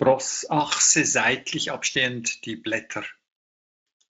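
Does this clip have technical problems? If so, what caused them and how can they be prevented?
Yes. From 0.6 s to the end, the speech turns thin, bright and sibilant: pre-emphasis left on. The treble boost, about 11 dB at 10 kHz relative to 1 kHz and consistent with a J.17 curve, was never undone by matching de-emphasis. To prevent it, apply the complementary de-emphasis filter wherever pre-emphasis is used in the chain.

At 1.91 to 1.97 s the sound is stretched out briefly and fades. This is VoIP packet loss concealed by the speech codec: about 40 ms of audio, which fits two lost 20 ms frames, was missing. The Speex decoder extrapolated from its last pitch and filter state while lowering the gain. To prevent it, use a jitter buffer, forward error correction or a more reliable network path to cut packet loss.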